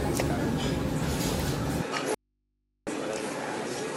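At 1.82 s the sound abruptly turns duller and drops about 5 dB, with no gap at the change, and it stays that way to the end. Nothing comes through above 11.4 kHz, and a new noise floor appears roughly 50 dB under the signal, so this is likely the input switching to a poorer device. Then from 2.14 s to 2.87 s the signal vanishes for about 725 ms, leaving only mains hum around 50 dB down. That's an audio dropout to a faint residue, likely the signal lost while the input stayed live.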